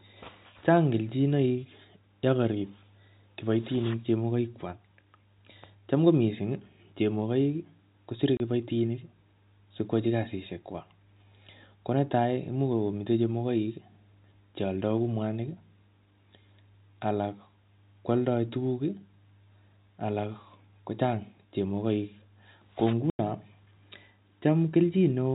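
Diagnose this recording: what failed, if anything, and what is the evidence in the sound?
Network stage: packet loss filled with silence. The sound drops out at 8.37–8.40 s, after "ko missing chemogoik kosire", and at 23.10–23.19 s, hard-edged gaps of 30 and 90 ms, consistent with one and three lost 30 ms packets.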